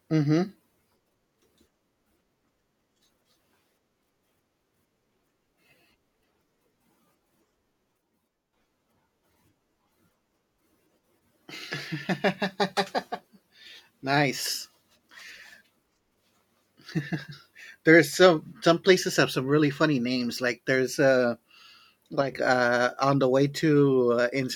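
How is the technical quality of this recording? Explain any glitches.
The recording has two short level dips in the speech, both the same kind of glitch. From 7.98 to 8.53 s, and again briefly from 22.22 to 22.32 s just before "uh on the way", the sound suddenly drops by about 6 dB and then jumps back. That abrupt half-level step is what you get when one channel drops out of a stereo pair that's then summed to mono, which is the likely cause here. Whatever both sides shared loses half its amplitude until the missing side returns.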